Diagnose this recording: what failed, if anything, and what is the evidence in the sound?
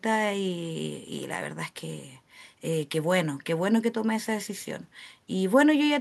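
Nothing in the speech stood out on listening that would point to a failure at any stage of the chain.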